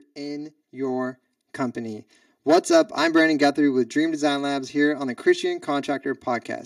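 Speech, with channel delay causing comb filtering the whole way through: one side trails the other by roughly 3 ms, so the mono sum notches out around 150 Hz and its odd multiples, sounding hollow. From 0.15 to 2.98 s you also get automatic gain rising, the gain creeping up about 8 dB so voice and background swell together.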